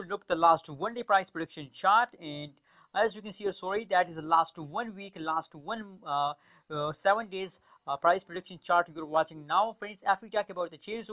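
Nothing goes wrong anywhere in the audio, so there's no technical fault to point to at any moment along the way.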